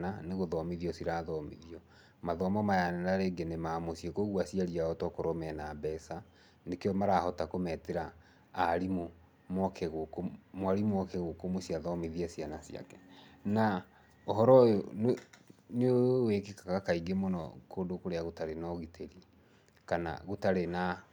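No technical faults are audible anywhere in the speech recording.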